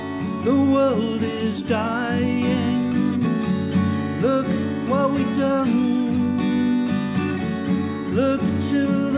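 Nothing technically wrong turns up in this audio: there are no dropouts, glitches or other faults anywhere in it.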